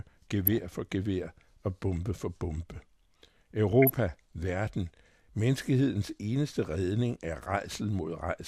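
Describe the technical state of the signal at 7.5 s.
At 7.49 s there is brief DAB burbling: uncorrected bit errors make single MP2 sub-bands jump, giving short blips of noise seen as isolated blocky spectrogram bands.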